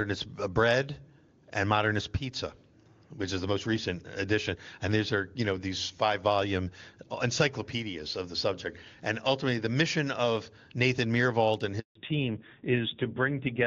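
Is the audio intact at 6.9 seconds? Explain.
Yes, the speech is intact at 6.9 seconds, carried cleanly by the AMR wideband (HD Voice) codec at 23.85 kbit/s, where it stays clear without the roughness of the lowest rates.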